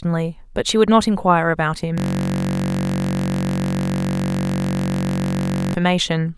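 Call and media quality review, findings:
Steady 46.9 Hz buzz replacing speech, 1.98 to 5.74 s. System hang loop: driver froze, hardware kept replaying one 21.33 ms slice, which fits a 512-sample buffer.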